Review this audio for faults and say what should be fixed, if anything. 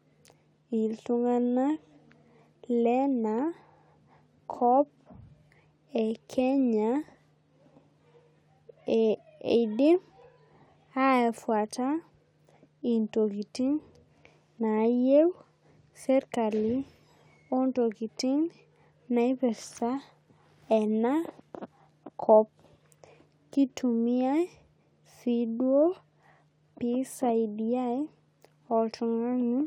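Nothing in this speech recording needs fixing. No faults turn up anywhere in it, so no correction or prevention step is called for.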